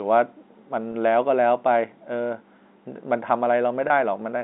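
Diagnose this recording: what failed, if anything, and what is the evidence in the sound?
The network stage dropped audio twice, and the receiver concealed each gap with packet loss with pitch repetition, at 0.92 to 0.94 s and 3.88 to 3.90 s. Each 20 ms gap fits a single lost packet. The decoder looped the last pitch cycle, so both spots sound like a brief, slightly buzzy held tone inside the telephone band. On a spectrogram the harmonics freeze into flat horizontal stripes. The waveform shows identical repeated periods before normal signal resumes.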